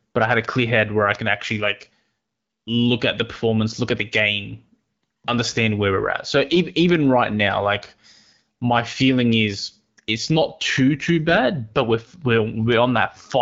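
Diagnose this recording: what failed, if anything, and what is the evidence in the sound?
Three sharp, broadband ticks at 0.45, 1.15 and 6.89 s, each one sample long: bit error spikes, from a flipped bit in storage or on a digital link.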